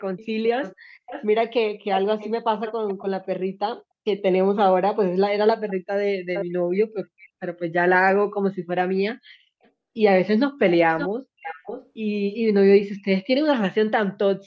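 Speech with echo leak. A delayed copy of the voice returns at 0.18–3.26 s, 5.46–5.8 s, 6.34–7.48 s, 9.63–9.69 s and 10.71–11.9 s. It trails by 0.45 to 0.57 s, roughly 10 to 15 dB down, barely audible at 9.63 s. The likely cause is a loudspeaker echo canceller letting pickup through.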